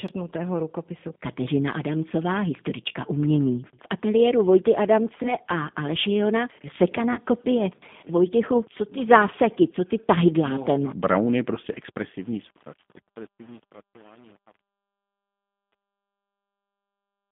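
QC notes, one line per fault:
Throughout: G.729 codec. The speech sounds narrow, slightly rough and synthetic, confined to about 150 Hz to 3.6 kHz with nothing above. The speech is rebuilt from a vocal tract filter, a pitch predictor and a few pulses per frame, which fits an 8 kbit/s G.729-type codec.
2.89–2.92 s, 5.23–5.34 s, 7.13–7.20 s: VoIP packet loss concealed by the speech codec. Each gap is briefly stretched into a buzzy tone or coloured noise, then sounds weak or distorted as normal speech resumes. The decoder stretched its last pitch and filter over missing audio, about 20 ms at the first two points and 40 ms at the third, consistent with one, one, and two lost packets.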